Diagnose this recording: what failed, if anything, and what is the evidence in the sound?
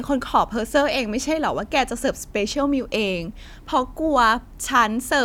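Nothing failed; no stage leaves audible evidence of trouble.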